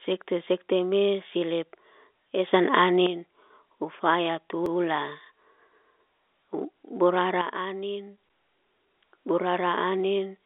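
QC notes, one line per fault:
2.53 to 3.07 s: sudden gain jump. Level leaps up about 8 dB, background noise with it, then drops back. Likely an unramped digital gain change.
4.66 s: CD skip. A brief mute of about 3 ms, then playback resumes from another point on the disc's spiral.
7.42 to 8.69 s: sudden gain jump. Level and noise floor fall about 8 dB together, then return. Again likely an instant gain step.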